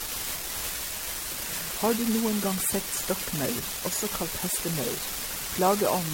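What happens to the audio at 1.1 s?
At 1.1 s the speech carries a steady crackle from an unreliable data bit, present throughout the clip. One marginal data line flips its bit in a random share of samples, so each error lands as an equal-sized spike, giving a fizz that continues through the pauses.

The same moment also sounds swirly, smeared and hollow, with blurred attacks and nothing above 16.6 kHz, again for the whole clip. The likely cause is generation loss from about five successive MP3 encodes, fitting a 64 kbit/s chain, where each pass requantised on a shifted frame grid and compounded noise and spectral holes.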